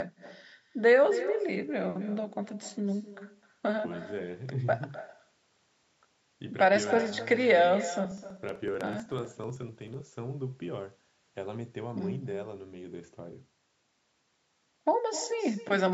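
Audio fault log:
Throughout: echo with no canceller. The far end's loudspeaker feeds its microphone and nothing subtracts it, so the speech returns after the network round trip. Every phrase is trailed, roughly 300 ms later, by a thinner copy about 14 dB quieter.
8.05–10.07 s: periodic USB or driver dropouts. Something blocks the audio path every 63 ms, and about a millisecond of signal is skipped each time, around thirty in all. The cuts are heard as an evenly spaced run of small ticks that sound only while speech is present.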